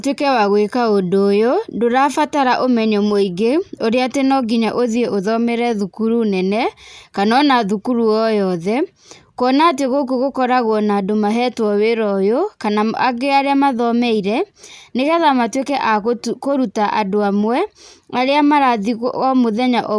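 No audible technical faults anywhere in this recording.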